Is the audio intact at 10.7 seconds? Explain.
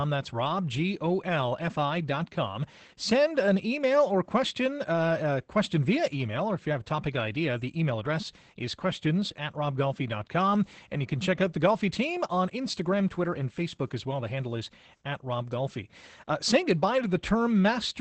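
No. At 10.7 seconds, like everywhere else in this speech clip, you're hearing Opus voice compression. It's in the SILK linear-prediction mode, wideband, so there's nothing above 8.5 kHz and the top end sounds dull. The excitation is coded coarsely, which fits a low rate of around 12 kbps. That's why the voice comes across plainly muffled and a bit hoarse, with a slightly robotic edge running the whole way through.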